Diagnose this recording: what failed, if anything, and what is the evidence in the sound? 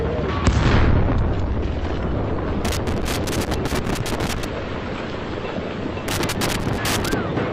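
Loose connector crackle in the analogue wiring. Irregular bursts of crackle and scratching run from 2.65 to 4.45 s and again from 6.08 to 7.13 s. A worn or dirty contact is making and breaking as it shifts. This chops the signal in uneven bursts.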